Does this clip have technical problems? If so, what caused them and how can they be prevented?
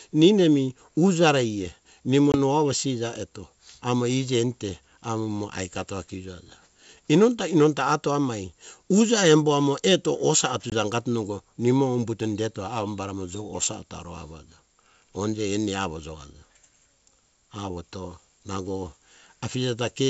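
Yes. There is packet loss on an ADPCM call at 2.32–2.37 s and 10.70–10.74 s. Each time about 20 ms of speech, likely a single packet, drops to hard-edged silence. The decoder's predictor and step size then lose sync. The speech returns slightly distorted before settling. Packet loss concealment with decoder state resynchronisation, plus a jitter buffer or redundancy on the network path, would prevent these gaps.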